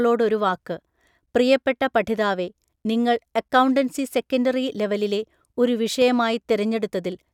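At 6.02 to 6.04 s a single loud pop rises a few dB above the speech, which continues underneath; likely a voltage step from a switch, plug or static discharge.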